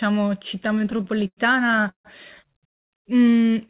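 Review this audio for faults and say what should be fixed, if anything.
Repeated stalls (stutter) run from 0.72 to 2.07 s: the sound catches and drags about eighteen times, with the longest hold lasting about 151 ms and roughly a third of that stretch filled in. Packets reached the receiver late or more slowly than playback consumed them, so the jitter buffer kept running dry, and each time the last sound was stretched, fading in the longer waits, until data resumed. Nothing appears lost, only delayed. The narrowband call path, with nothing above 4 kHz, is consistent with G.711. To prevent the stalls, stabilise the network path or let the jitter buffer grow adaptively so it holds enough margin to ride out late arrivals.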